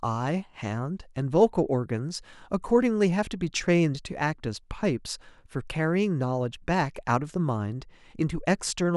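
No technical faults can be heard anywhere in this speech recording.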